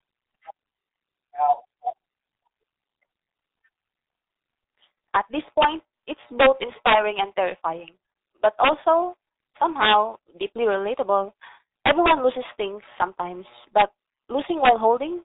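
Muffled and hoarse from start to finish, this speech clip has consonants smeared together and no content above about 3.8 kHz. That points to heavy G.723.1 codec damage: the codec chops the signal into 30 ms frames and rebuilds the voice from a coarse, slowly updated model, so fine detail and quick transitions get lost. The thin, band-limited result fits a rate of about 6.3 kbit/s.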